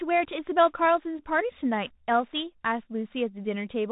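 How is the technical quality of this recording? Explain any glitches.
The quality is held back by one fault that runs the whole way through: this is Bluetooth CVSD headset codec audio. Nothing above 3.8 kHz gets through, so the speech sounds boxed-in and telephone-like. CVSD sends just one up-or-down bit per sample, which fits a 64 kbit/s stream, and its step size can't keep up with loud, fast high content. That's why the s sounds come out scratchy and a grainy hiss sits under the speech. The damage is plainly audible.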